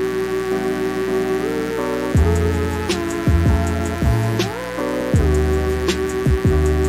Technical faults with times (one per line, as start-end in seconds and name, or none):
0.00-6.88 mains buzz